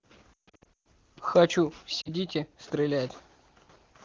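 From about 0.33 to 0.86 s there's a burst of lost AMR speech frames: radio errors kill frames scattered across roughly half a second, and the decoder papers over each gap by repeating the last good frame with sinking gain. You hear speech smearing and fading, worst in one stretch about 140 ms long, before recovering rough. Another short dropout hits at 2.01–2.10 s as a quick warble. The wideband speech itself is clean, consistent with a high AMR-WB rate.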